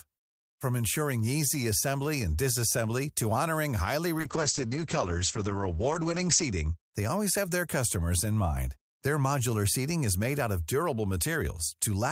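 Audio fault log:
4.18 to 6.81 s, call bitrate drop: The encoder's bit budget collapses, in a way that fits a fall from about 40 to 9 kbps. Coding turns coarser, and content above 8 kHz disappears for about 2.3 s. The bitrate then recovers and the top end returns.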